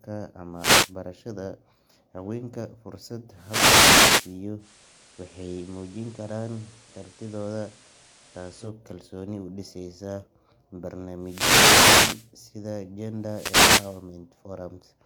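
A wireless microphone's FM link fades as reflections cancel, so receiver noise swells into short static swishes: wireless microphone noise hits at 0.54–0.95 s and 3.33–4.42 s. From 4.58 to 8.72 s the digital signal drops out and the radio blends to analogue FM over 108 ms, adding hiss around 30 dB down, at unchanged level. Further wireless microphone noise hits follow at 11.19–12.33 s and 13.17–14.12 s.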